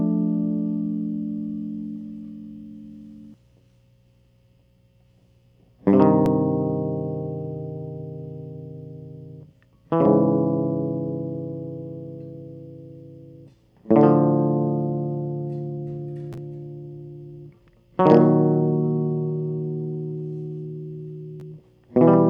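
From the start of the music to 3.34 s, a doubled audio track is heard: a second full-band copy trails the original by about one and a half seconds at roughly equal level, with no decay, then stops abruptly, likely from a slower capture path.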